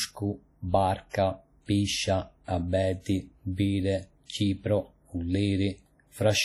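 A transform codec running at a low bitrate likely accounts for the damage heard across the whole speech clip, consistent with WMA compression at about 32 kbps. With so few bits, the encoder spreads quantisation noise over long blocks and drops weaker spectral lines, so the damage is heavy: the speech rings, smears and sounds washy, and a hiss swells and fades with the signal, even though content still reaches about 20.1 kHz.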